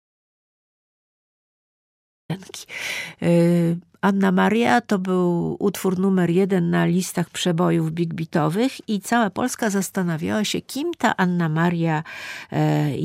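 From the start to 2.3 s the clip is silent, an audio dropout to silence, likely from the input being lost while recording continued. The gap is completely empty with no room tone, and speech comes back abruptly mid-flow.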